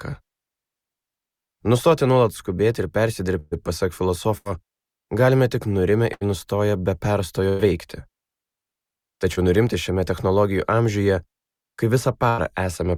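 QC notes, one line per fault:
3.39–3.53 s, 4.37–4.47 s, 6.13–6.23 s, 7.49–7.61 s, 12.29–12.40 s, burst of packet loss: 80–120 ms of audio never arrived, so the last sound is stretched and faded, then the sound resumes further on.
9.35–9.39 s, short concealed packet loss: about 20 ms missed the decoder, and the patched-in continuation blends back as a brief smear or wobble.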